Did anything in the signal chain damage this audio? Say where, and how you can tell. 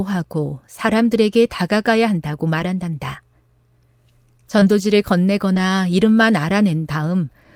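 Yes. The damage is at the network stage, where short stretches of speech never arrived intact and the Opus decoder had to paper over them.

Lost packet rebuilt from error correction occurs at 2.59 to 2.61 s, 4.61 to 4.63 s and 5.55 to 5.57 s, 20 ms each. Each time one packet was lost, and the decoder played a low-bitrate copy carried in the following packet, so there is no gap but that 20 ms sounds rougher and noisier.

Short concealed packet loss occurs at 4.59 to 4.63 s and 5.53 to 5.57 s, about 20 ms missing each time. It overlaps the rebuilt packets at 4.61 s and 5.55 s. The receiver extended the preceding sound to fill each hole, then blended back in, which is heard as a brief smear or wobble.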